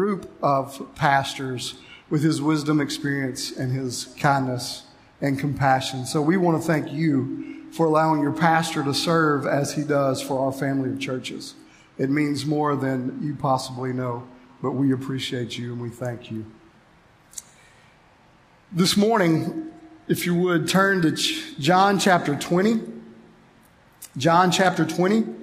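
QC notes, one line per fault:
No fault found in the audio.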